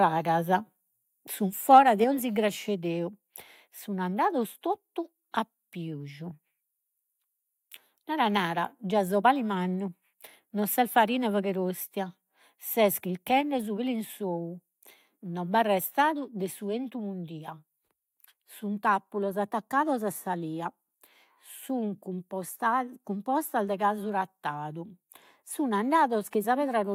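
At 1.73 to 1.78 s a loud syllable turns harsh and crackly, its peaks flattened: likely microphone overload, driving the converter about 1 dB past its limit on a small share of samples. At 2.04 s, then 13.41 s and 16.02 s, voice and background suddenly drop about 4 dB, then about 2 dB twice, which points to a likely microphone volume stepped down by the call software, the first just after the clipping.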